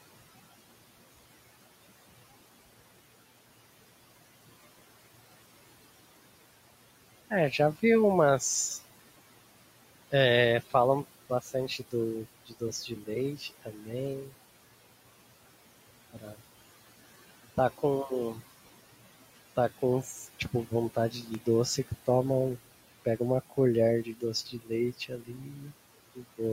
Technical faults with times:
0.00-26.52 noise suppressor artifacts
11.30-11.93 speech cut by the noise suppressor
12.47-14.33 speech cut by the noise suppressor
16.13-16.36 speech cut by the noise suppressor
17.57-18.38 speech cut by the noise suppressor
19.56-22.08 speech cut by the noise suppressor
21.21-21.43 processor overload crackle
23.05-26.40 speech cut by the noise suppressor

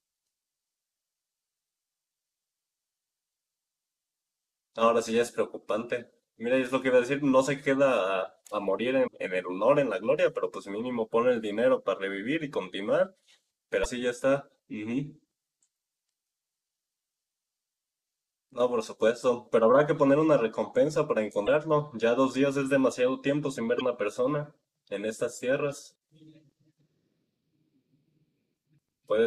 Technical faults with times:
9.06 damaged data in a compressed stream
13.81-13.86 damaged data in a compressed stream
21.45-21.48 damaged data in a compressed stream
23.77-23.81 damaged data in a compressed stream

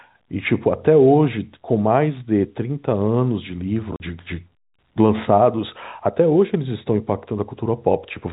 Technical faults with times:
3.96-4.00 packet loss filled with silence

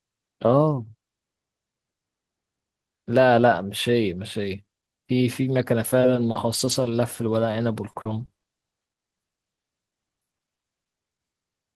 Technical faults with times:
6.01-11.19 repeated packet loss (robotic sound)

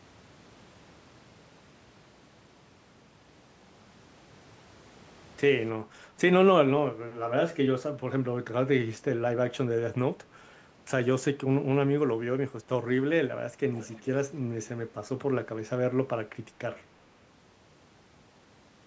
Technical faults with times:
13.73-14.05 echo leak

